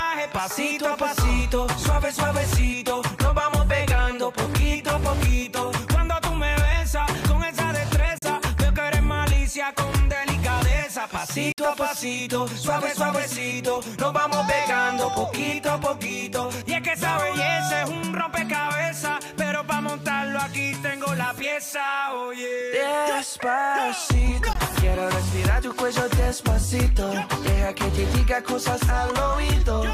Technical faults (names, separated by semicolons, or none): Bluetooth dropout